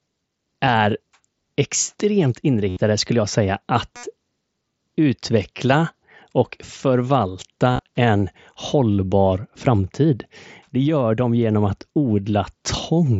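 Speech carried over a Bluetooth mSBC headset link, with its light grainy texture and 8 kHz upper limit, shows concealed Bluetooth headset packet loss three times. At 2.69 s about 75 ms is lost and at 3.96 s about 68 ms, each filled by repeating recent waveform, so a short buzzy tone holds at full level, then warbles as real sound resumes. From 7.68 to 7.87 s the losses are scattered short gaps, none longer than about 23 ms. Unlike plain dropouts, the gaps never fall silent.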